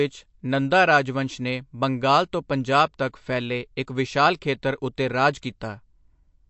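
MP3 compression artefacts run through the whole clip. The speech has nothing above 8 kHz and a plainly audible watery swirl, as weak spectral detail drops in and out between frames. The likely cause is an MP3 encoder starved of bits, which fits roughly 48 kbps.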